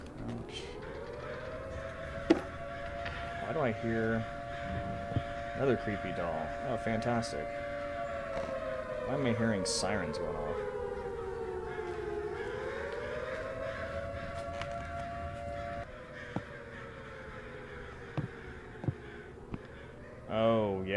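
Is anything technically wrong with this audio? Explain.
No, nothing technically wrong stands out here; the audio sounds steady and intact all the way along, with nothing to flag.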